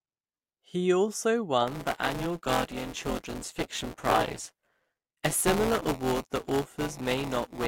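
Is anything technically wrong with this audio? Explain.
Yes. From 1.67 s to 7.67 s there's buffer tearing. The code filling the playback ring buffer and the hardware draining it have drifted out of step, so they cross partway through every period. About a fifth of each buffer ends up holding speech from roughly ten milliseconds earlier, with hard splices at both edges. You hear that as a steady robotic buzz at 172 Hz, which fits a 256-sample buffer, and it rides along only while there's speech to chop up.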